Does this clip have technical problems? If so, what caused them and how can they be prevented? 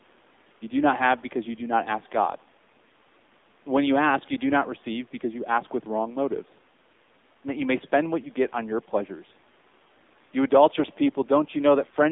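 Yes. Throughout the speech, the AMR narrowband mobile codec is plainly audible. The voice is confined to roughly 200 Hz to 3.6 kHz, with nothing above 4 kHz, and has the buzzy, synthetic quality of a low-rate vocal-tract model, which fits a bitrate of about 7.4 kbps. At that rate the codec represents each 5 ms with only a few excitation pulses, so fine detail is replaced by an approximated, mechanical texture. The call's microphone high-pass removes the lowest bass as expected. To prevent this, route the call over a wideband codec such as AMR-WB or use a higher AMR bitrate mode.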